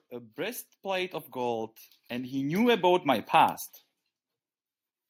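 A speech recording with automatic gain rising from 0.08 s to 3.62 s. Over those three and a half seconds the level climbs steadily, by about 13 dB in total. The talker and the background swell together, so the background grows right along with the voice. That shared rise is the giveaway. An automatic gain control judged the input too quiet and kept turning itself up, slowly, until it settled near 3.6 s.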